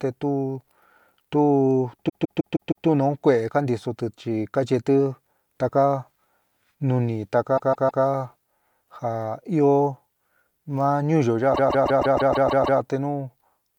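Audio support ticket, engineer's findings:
Repeated frames, 2.08–2.86 s: stutter, same 157 ms block played five extra times, about 0.78 s added. Frame run resent or rewritten upstream of decoder; block length fits roughly six compressed frames.

Repeated frames, 7.56–8.03 s: same 157 ms block, three extra plays, about 0.47 s added.

Repeated frames, 11.53–12.79 s, just after "ma ñuúyo": eight extra plays, about 1.25 s added.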